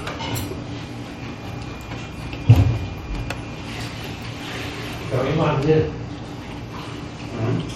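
From start to finish the sound has a watery, swirling quality, with a hard ceiling at 17.1 kHz and nothing above it. This is likely MP3 compression at a low rate, consistent with roughly 48 kbps. Starved of bits, the encoder cuts the treble at a fixed point and drops quieter frequency components, which flicker in and out from frame to frame. That flicker creates the swirl, and sharp onsets lose their crispness.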